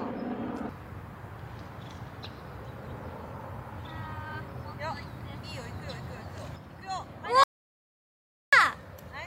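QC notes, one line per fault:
7.44–8.53 s: audio dropout to silence. The sound cuts off mid-flow and returns about 1.09 s later. The gap is silent, with no room tone underneath. The input was likely lost while the recorder kept writing silence. Everything in that span is gone.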